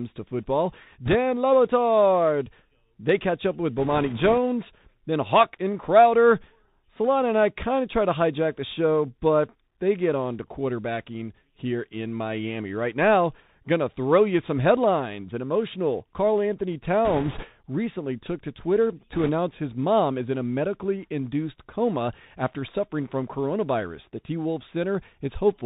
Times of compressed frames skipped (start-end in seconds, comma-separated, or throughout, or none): none